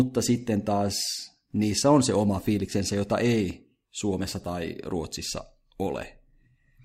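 At 3.51 s a single sharp click cuts through the speech, a brief tick with no gap or dropout around it, showing up as a thin vertical line across the spectrum. This is a case of dropped samples: the likely cause is that a fraction of a millisecond of the stream went missing, so the waveform leaps straight from one value to a later one. The discontinuity is far too short to remove any audible sound, leaving only the click.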